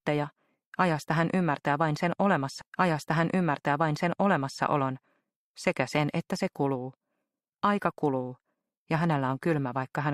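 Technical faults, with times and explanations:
2.61–4.61 s, stream segment repeated: at 2.61 s the playback jumps back and replays the previous two seconds of audio, with a small blip at the join. The player fetched or queued the same two-second segment twice, so that stretch is heard again.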